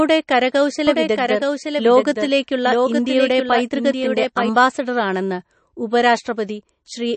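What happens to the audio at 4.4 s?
At 4.4 s a doubled audio track is still playing. A second copy of the speech, likely from a slower capture path or an out-of-step edit, runs about a second behind the original from 0.87 to 4.49 s. It is a somewhat quieter, dry repeat that cuts off abruptly just after this point. Throughout, MP3 compression that points to a bitrate near 35 kbps likely cuts everything above 8.3 kHz and leaves a watery, swirly texture.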